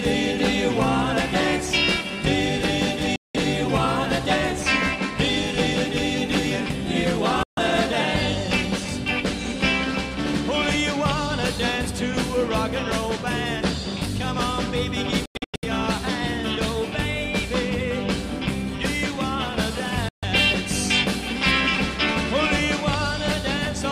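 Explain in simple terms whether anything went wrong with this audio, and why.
The sound cuts out four times: 3.16–3.36 s, 7.43–7.59 s, 15.26–15.65 s (several short gaps, the longest about 93 ms) and 20.09–20.24 s. These are a Bluetooth dropout, likely wireless data arriving too late and being discarded, so playback skips ahead.

At 11.95 s there is one sharp click. These are dropped samples, likely a handful of samples missing, a tiny fraction of a millisecond. Nothing audible is lost, but the waveform jumps abruptly and produces the tick.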